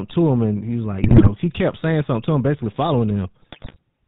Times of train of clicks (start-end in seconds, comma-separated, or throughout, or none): none